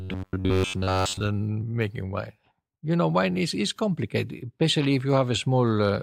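A speech clip whose opening, from 0.01 s to 1.21 s just before "making wine", carries robotic sound from repeated short buffers: the voice collapses into a rigid, metallic buzz pitched at about 93.8 Hz that only loosely tracks the speech. Most of that stretch is a loop of roughly 10.7 ms of audio replayed while fresh material is skipped, likely from audio arriving too seldom. A spectrogram shows evenly spaced horizontal harmonics at 93.8 Hz multiples, and the waveform shows a near-identical short cycle tiling the segment.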